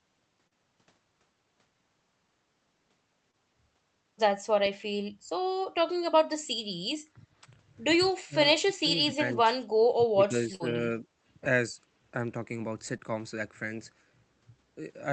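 At 0.47 to 0.53 s and again at 3.31 to 3.35 s there is short concealed packet loss. Around 40 ms and then 20 ms never arrived, and the decoder extended the preceding sound to cover the hole. Each gap is heard as a brief smear. On a spectrogram it shows as a short stretch of frozen, repeated harmonics or blurred noise before normal detail returns.

From 7.14 s onward the speech dips repeatedly. The dips fall at 7.14 to 7.26 s, 8.27 to 8.35 s, 8.64 to 8.94 s and 9.97 to 11.06 s, where about 0.7 s is affected, and briefly at 11.73 s. This is likely speech suppressed in double talk, with an echo canceller ducking the talker while the far side spoke. The deepest drops are around 20 to 25 dB, the longer stretch is shallower at about 15 dB, and the last dip is slight. The waveform envelope sags in chunks.

Inside that long dip, at 10.55 to 10.62 s, a burst of packet loss removes about 40 ms. The gap is bridged by a held, fading continuation of the last sound before the audio resumes further on. 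It appears as a flat, decaying band with a discontinuity at its end.

At 12.98 s another brief concealed loss of about 20 ms leaves a small smear, visible as a tiny smoothed patch in the spectrogram.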